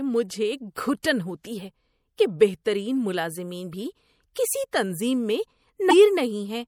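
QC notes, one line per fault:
throughout, MP3 compression: the speech has a watery, swirling quality with smeared consonant onsets and a dulled top end, plainly audible and consistent with a low bitrate around 64 kbps. The encoder likely ran short of bits, so it cut the treble at a fixed point and dropped weak frequency lines that flicker in and out between frames. On a spectrogram this shows as a hard horizontal ceiling with patchy, speckled holes beneath it, most visible around sibilants.
5.89–5.93 s, damaged data in a compressed stream: a brief 40 ms glitch breaks into the speech, the sound of the decoder hitting corrupted bytes, misreading or discarding those frames, and losing sync until it finds the next valid frame header. The result is a short disruption. On a spectrogram it appears as a narrow vertical smear of broadband or oddly tonal energy; on the waveform, an abrupt discontinuity.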